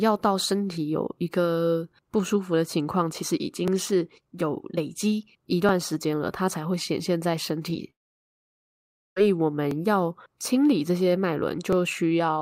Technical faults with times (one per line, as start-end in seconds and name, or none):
3.68 overlapping chunks
5.69 overlapping chunks
7.70 overlapping chunks
7.90-9.21 long network dropout
9.71 overlapping chunks
11.73 overlapping chunks